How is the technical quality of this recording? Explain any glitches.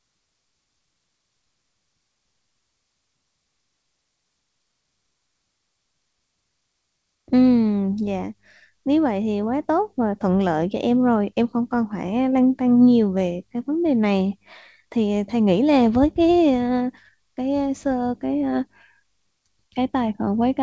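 No glitches turn up anywhere in this speech recording, which came over a call connection, and the way the sound tops out at 8 kHz fits a wideband codec like G.722 at 64 kbps doing just what it's built to do.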